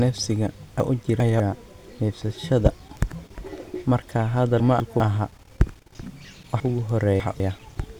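A 200 ms block of this speech recording was delivered late three times and played after the blocks meant to follow it (two, one and three blocks late), causing chunks out of order at 0.8–1.4 s, 4.6–5.0 s and 6.6–7.4 s. Each moment sounds jumbled, with hard joins.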